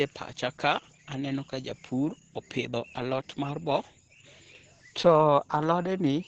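Across the whole clip the speech carries heavy Opus voice compression in its SILK linear-prediction mode: muffled, hoarse and faintly robotic, which fits a rate of about 10 kbps. A spectrogram shows nothing above 8.9 kHz and smeared, coarse harmonics below.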